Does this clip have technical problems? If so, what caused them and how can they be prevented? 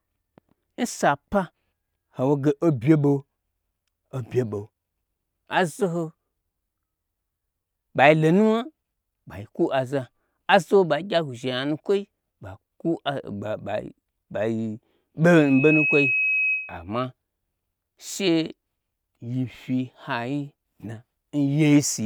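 Yes, there's a loudspeaker feedback squeal from 15.34 to 16.84 s. A single tone at 2.6 kHz swells up in under half a second and ends up roughly as loud as the speech itself. The mic was picking up the speaker it was feeding, and at 2.6 kHz the round trip through that loop had more than unity gain, so the tone kept feeding itself and grew until something held it back. To prevent it, keep the mic out of the speaker's coverage, pull back the gain, or notch out around 2.6 kHz.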